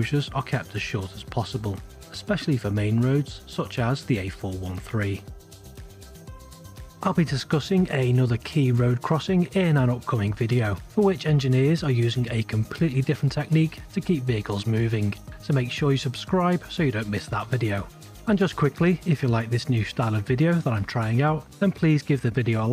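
No technical faults are audible anywhere in the recording.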